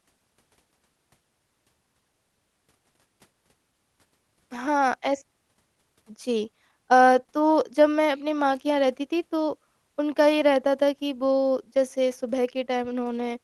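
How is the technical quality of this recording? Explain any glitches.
The recording has timing glitches from a clock mismatch in the call path, heard through the usual Opus coding noise and a top end that stops around 12 kHz.

Clock drift between sender and receiver runs through the whole clip. The sender's clock runs roughly five percent fast. Audio arrives quicker than the receiver plays it. Its jitter buffer keeps filling, so it must shed material. The result is small timing hiccups that recur at uneven intervals.

Repeated timing corrections occur from 0.31 s to 13.37 s. The receiver cuts short pieces to keep up, so playback runs at about 105% speed. The cuts all go the same way but are unevenly spaced. Each is small.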